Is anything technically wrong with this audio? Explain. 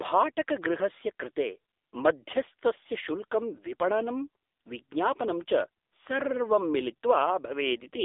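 Yes, the whole clip has gone through an AMR narrowband mobile codec, the old 2G/3G phone speech coder. Nothing gets through above about 3.8 kHz, and the lows roll off below about 300 Hz, so the speech sits in a thin telephone band. The codec rebuilds the voice from a vocal-tract model fed by a handful of pulses per short frame, and the damage here is heavy: buzzy and synthetic throughout, which fits AMR-NB's low 6.7 kbps mode.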